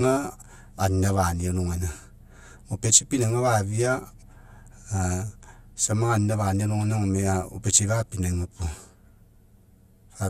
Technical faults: channel delay (comb filtering)

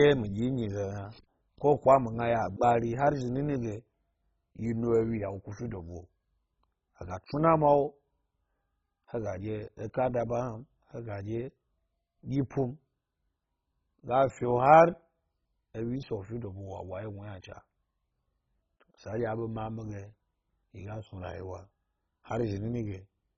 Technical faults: MP2 compression

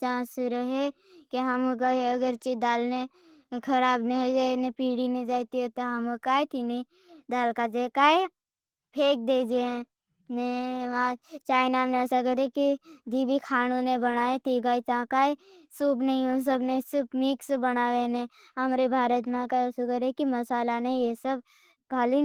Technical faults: Opus compression

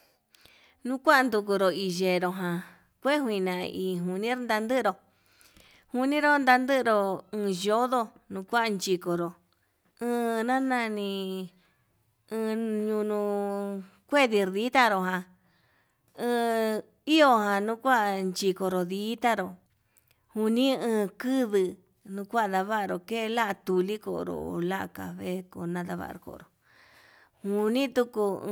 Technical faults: audio missing between chunks

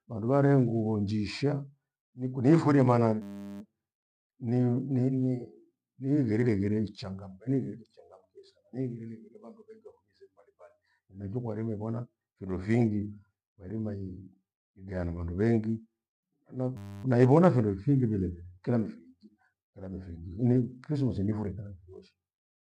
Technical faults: system hang loop

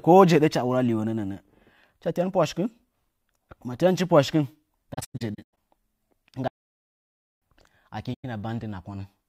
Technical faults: AAC frame loss with muting; playback stall

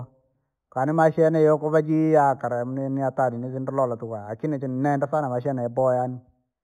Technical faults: imaging from linear upsampling

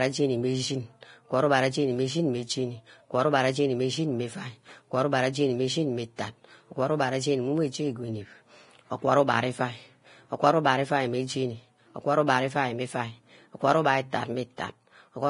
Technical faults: Vorbis compression

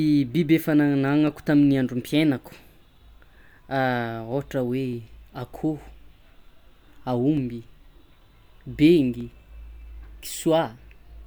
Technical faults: clock drift buffer slips

